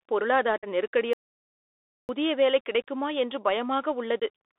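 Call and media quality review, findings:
Bluetooth CVSD headset codec, whole clip: 64 kbit/s delta modulation on the headset link, passband roughly 300 Hz to 3.7 kHz. Speech sounds narrowband and muffled, s sounds scratchy, loud peaks distort from slope overload, and a granular hiss sits underneath.

Unconcealed Bluetooth headset packet loss, 0.58 to 0.68 s (about 49 ms, around fifteen packets), 2.82 s and 4.20 s (about 19 ms each, a handful of packets): lost voice packets replaced with silence or an idle pattern, no concealment. Speech has abrupt holes and returns briefly quieter.

Audio dropout to silence, 1.13 to 2.09 s (about 0.96 s): input stream likely lost at the link or device, with silence written in its place. Speech cuts off mid-flow into dead digital silence with no room tone, and that content is gone.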